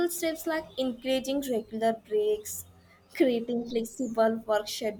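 At 3.70 s there is a DC step. The zero line of the waveform jumps suddenly to a new offset. That sudden shift is heard as a single low thump. The speech carries on unchanged through it. The offset does not hold. It drains away, the way a 2 Hz high-pass filter would let it settle.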